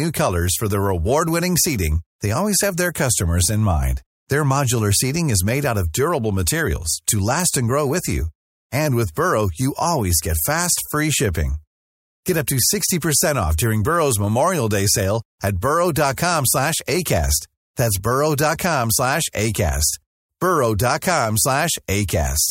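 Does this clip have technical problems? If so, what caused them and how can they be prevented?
No, no technical faults.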